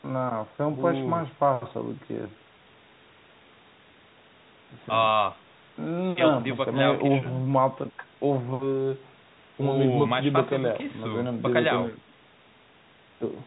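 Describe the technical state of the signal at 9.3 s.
At 9.3 s the speech is intact, with no fault to be heard, only the narrow telephone band of G.711 coding that it passes through throughout.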